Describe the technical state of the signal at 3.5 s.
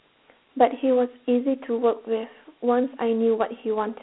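Dialogic VOX ADPCM coding runs through the whole clip, including 3.5 s. The 4-bit step-adaptive coding, fitting a 32 kbps stream, leaves gritty hiss trailing the speech. A spectrogram shows a telephone band of about 250 Hz to 3.4 kHz, with nothing above 3.9 kHz.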